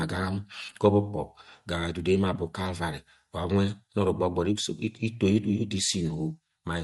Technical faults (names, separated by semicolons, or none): Bluetooth LC3 compression; lost LE Audio frames